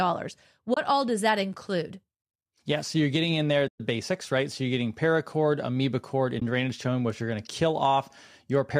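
It's speech with three dropouts from AAC frame loss with muting: a short dip at 0.74–0.77 s, a soft-edged 120 ms hole at 3.68–3.80 s, and another brief dip at 6.40–6.42 s. In each, the decoder zeroed the lost frames and the overlapping windows faded the sound out and back in. There's also a light coding texture, likely from low-delay AAC compression (AAC-ELD) at a rate that fits around 64 kbps.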